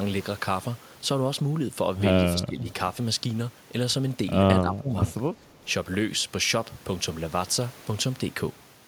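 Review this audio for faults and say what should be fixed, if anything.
The echo canceller likely failed to separate the talker from the far-end echo during double talk and suppressed both, causing speech suppressed in double talk: the speech drops by around 15 dB at 2.33–2.66 s and 4.61–4.92 s. Tuning the canceller's double-talk detection to keep near-end speech would prevent it.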